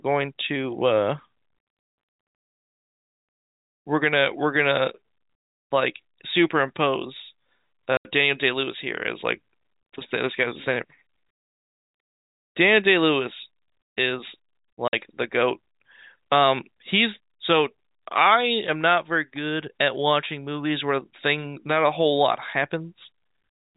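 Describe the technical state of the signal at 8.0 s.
Packet loss filled with silence runs from 7.97 to 8.05 s: an 80 ms stretch of the speech went missing in transit and the receiver played dead air instead, leaving a hole with abrupt edges. Its length fits several lost 10 ms packets.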